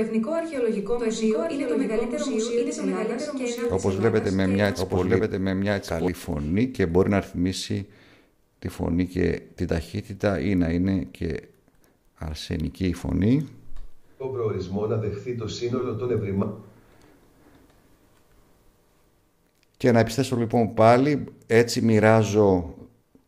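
From the start to 6.08 s, a doubled audio track runs about a second behind at equal level, likely from a second capture path. Unlike echo, it has no decay and stops abruptly.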